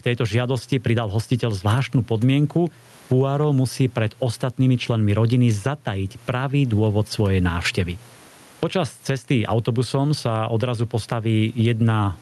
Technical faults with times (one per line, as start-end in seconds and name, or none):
0.00-12.21 gain pumping